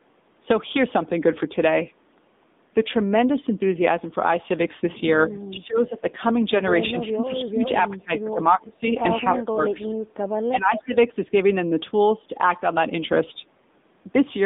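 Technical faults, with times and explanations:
Throughout: AMR narrowband mobile codec. The sound is confined to roughly 200 Hz to 3.7 kHz, with nothing above 3.8 kHz, and the speech has a plainly audible buzzy, synthetic edge. That texture fits a low AMR-NB mode around 7.95 kbps. With so few bits, the vocal-tract model and sparse pulse excitation rebuild the voice only coarsely. A plain band-limited line would sound dull but natural. Here the timbre itself is artificial.
5.52–6.02 s, 6.91–7.64 s, 7.89–8.39 s, 8.55–8.86 s, 9.38–9.60 s, 9.86–9.95 s and 10.50–10.92 s: speech suppressed in double talk. The speech level sags in each stretch, by about 10 dB at the mildest and about 25 dB at the deepest, for roughly a tenth to half a second each time. This is likely an echo canceller that could not separate the talker from the far side's echo and ducked everything. Packet loss would leave gaps or glitches. 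Here the voice is turned down rather than broken.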